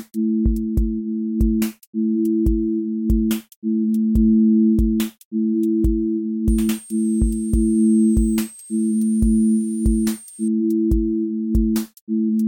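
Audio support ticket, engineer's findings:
Switching supply whistle, 6.49 to 10.48 s. A switching regulator is dropping into audible burst mode or beating against a second supply, and the tone leaks into the audio path. The result is a high whistle, wandering between 8.19 and 9.11 kHz as load shifts, roughly 20 dB below the programme.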